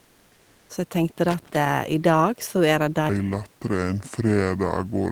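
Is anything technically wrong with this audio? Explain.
Yes, the speech clip has three faults.

From 0.00 to 0.67 s, the background is a steady, featureless hiss about 2 dB quieter than the real room tone, roughly 37 dB below the loud parts. This is comfort noise in place of the background, likely from Opus DTX: the sender stopped transmitting during silence and the receiver synthesised filler noise.

From 1.28 to 1.69 s, an irregular burst of crackle and scratching cuts through. This is loose connector crackle: a worn or dirty contact rapidly made and broke the circuit, chopping the signal.

From 3.09 s to the end, the speech turns deep and sluggish, about seven semitones lower, at 0.671 times normal speed. This is a section at the wrong speed, likely played against the wrong clock, so pitch and tempo dropped together. The ordinary room noise, about 39 dB below the speech, is not a fault.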